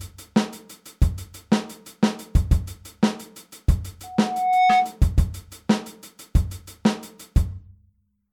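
An audio clip with a loudspeaker feedback squeal from 4.03 to 4.97 s. A single tone at 737 Hz rises out of the sound, swelling over about 0.7 s until it sits about 5 dB above the rest of the audio, then stops. The microphone was picking up the loudspeaker it fed, and at that one frequency the loop gain exceeded unity, so the tone reinforced itself on each pass.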